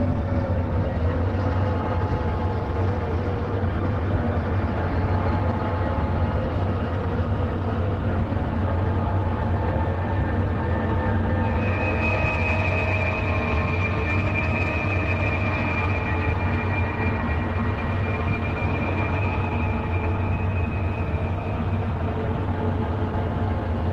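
No audible technical faults.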